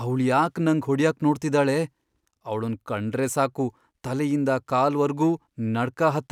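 No technical faults are audible.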